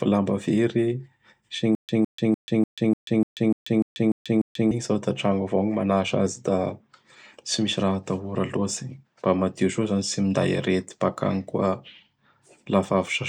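Speech with stutter and silent gaps from 1.75 to 4.71 s: a 158 ms fragment repeats ten times, each followed by 138 ms of digital silence. Unlike a plain dropout, the same burst returns every 296 ms, which points to a likely playback stall that replays the last buffer.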